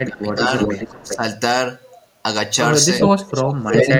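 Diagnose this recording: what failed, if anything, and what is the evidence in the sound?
Speech suppressed in double talk, at the call-processing stage. From 0.04 to 1.23 s the speech level sags by up to about 15 dB, over roughly 0.7 s in total. From 3.47 to 3.92 s it drops much deeper, about 35 dB, for about half a second. The likely cause is an echo canceller turning down the near talker while the far side is also active.

Echo leak, also in call processing. A delayed copy of the speech returns at a steady lag of about 0.4 s: from 0.59 to 1.17 s at about 5 dB below the direct speech, from 2.99 to 3.5 s at roughly equal level, and from 3.73 s to the end, again near equal. The likely cause is a loudspeaker echo that the far end's canceller did not fully remove. A fixed, discrete 400 ms repeat separates it from room reverberation, which decays smoothly.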